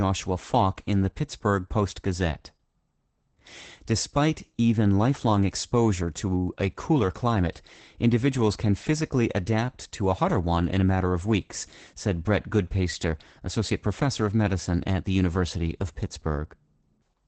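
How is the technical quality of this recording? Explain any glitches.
The recording is compromised throughout by plainly audible Opus voice compression, with no other problems on top of it.

For the full clip, the speech sounds muffled and slightly hoarse, with a faint robotic edge. The muffling matches a wideband SILK coder, which predicts speech from a vocal-tract model and codes the leftover excitation coarsely. The result fits roughly 12 kbps in 20 ms frames. On a spectrogram, energy stops sharply at about 8.8 kHz, and harmonics look smeared and grainy. The waveform shows no obvious marks.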